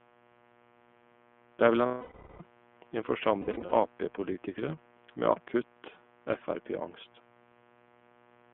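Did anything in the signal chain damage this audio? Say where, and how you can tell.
Yes. The analogue wiring adds a steady, raspy buzz under the speech for the whole clip, sitting roughly 30 dB below it. Its fundamental is 60 Hz, and it carries a bright edge from harmonics reaching well up the spectrum. That is mains buzz: sharp switching spikes from a dimmer, a rectifier or an unshielded run enter the line twice per mains cycle. Their 60 Hz harmonic series rides on the signal before it is ever digitised.

At the codec stage, the speech has a narrow telephone quality throughout. The band runs from about 200 Hz to 3.4 kHz, and the speech sounds plainly rough and slightly synthetic. That is the iLBC codec, and its damage is clearly audible here. The sound fits its 13.33 kbps mode with 30 ms frames. Each frame's excitation is coded on its own, with no reference to the one before. This gives the speech its grainy, artificial texture and leaves nothing above 4 kHz.

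In the network stage, the speech gives way to a held, buzzy, slightly breathy vowel from 1.86 to 2.41 s. That is about 540 ms, which fits eighteen 30 ms frames, and the tone fades as it goes on. From 3.42 to 3.73 s, shorter stutters of the same kind are scattered over about 300 ms, the longest run near 70 ms. These are lost iLBC frames. For each missing packet, the decoder repeats the last pitch cycle mixed with noise. Because frames stand alone, the speech recovers almost at once.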